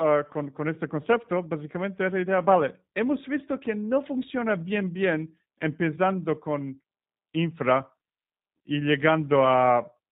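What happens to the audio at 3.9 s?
At 3.9 s the speech carries G.729 codec damage, present across the whole clip. It is rebuilt from a vocal-tract filter, pitch predictor and sparse pulses, fitting 8 kbit/s G.729A. Nothing passes above 4 kHz, and unlike a simple low-pass filter, voicing sounds plainly rough and synthetic.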